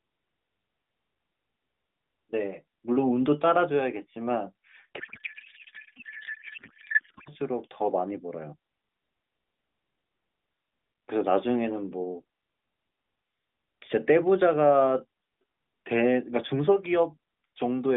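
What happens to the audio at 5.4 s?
At 5.4 s the speech is hit by a codec payload misread, running from 4.98 to 7.32 s. The AMR frames were packed octet-aligned but decoded as bandwidth-efficient. The decoder therefore pulls its parameters from the wrong bit positions. The frames still look valid, so it keeps producing sound. What comes out is garbled noise and warble that barely tracks the speech. The narrowband mobile line around it stays within roughly 200 Hz to 3.6 kHz.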